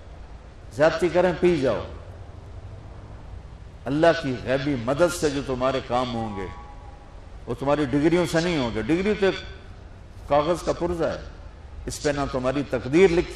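From the start to the end there's periodic clock jitter: something is wobbling the converter's sample clock at around 1 kHz, so every component picks up sidebands either side at that spacing. It gives a gritty, metallic edge, worst on the high end, and disappears whenever the audio goes quiet.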